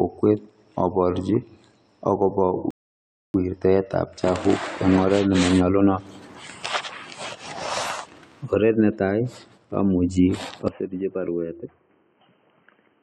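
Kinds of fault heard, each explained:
Rebuffering stall: The player ran out of downloaded audio and waited for more to arrive, so the speech cuts to silence at 2.71 s and resumes intact at 3.34 s with "wirtaetab chabuk eng oret", adding about 0.64 s without losing any sound.
Input switched to a poorer device: The recording likely changed mid-stream to a lesser microphone or headset profile. After "netai amuchi", from 10.68 s to the end, the speech turns dull, with nothing above 3.1 kHz, drops about 10 dB, and carries a faint new noise floor, with no gap at the switch.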